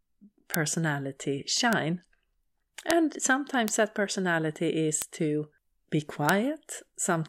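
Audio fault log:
0.54, 1.73, 2.91, 3.68, 5.02, 6.29 s: bit error spike. A single flipped bit throws one to three samples up to about -2 dBFS (about -8 dBFS at 1.73 s) before they snap back, giving a bare broadband tick unrelated to the speech, with no gap or waveform flattening as in a dropout or clipping.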